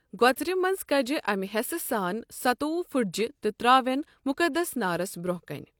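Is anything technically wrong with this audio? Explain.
No, nothing technically wrong can be heard in this speech recording. It runs without any audible faults.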